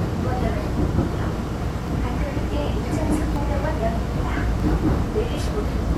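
Samples were likely not collected before the hardware overwrote them, a dropped buffer (overrun), so the sound jumps ahead without silence at 1.16, 1.88, 3.36, 4.6 and 5.48 s. The longest skip, roughly a tenth of a second, is at 1.16 s.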